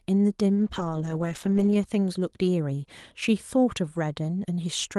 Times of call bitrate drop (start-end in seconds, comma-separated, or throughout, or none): 0.57-1.83